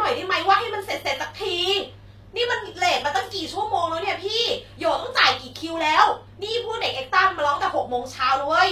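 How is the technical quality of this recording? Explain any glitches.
The recording is clearly degraded, with two faults running through almost all of it.

From start to finish the speech carries HE-AAC compression damage, most likely from a low bitrate around 24 kbps. The treble is rebuilt by copying lower bands upward, so sibilants sound gritty and lispy. On a spectrogram, the upper band appears as smeared, repeated patches with a hard ceiling at 14.9 kHz.

From 0.11 s to the end, clock slip clicks arrive roughly every 20 milliseconds, about fifty per second and hundreds overall. Two unsynchronised clocks likely drift apart by roughly a tenth of a percent, so one sample is dropped or repeated each time, which sounds like a soft rattle under the speech. A waveform shows tiny regular discontinuities, and a spectrogram shows faint evenly spaced vertical lines.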